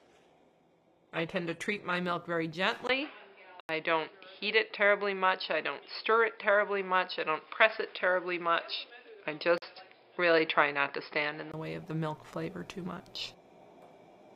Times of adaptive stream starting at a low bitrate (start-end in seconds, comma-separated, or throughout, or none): 0.00-2.00